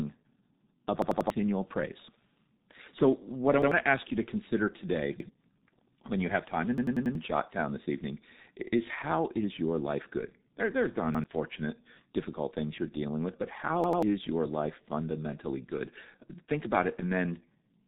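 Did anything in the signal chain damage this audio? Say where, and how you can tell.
Yes. The G.723.1 codec damaged the whole clip. The speech is muffled and hoarse, with nothing above 3.8 kHz, and consonants blur as the coarse low-rate voice model updates slowly.

A repeated buffer fault at the driver or buffer stage occurs at 1.02–1.30, 3.62–3.72, 5.20–5.29, 6.78–7.15, 11.15–11.24 and 13.84–14.03 s. Roughly 93 ms stutters replay with hard joins, which fits a 4096-sample buffer.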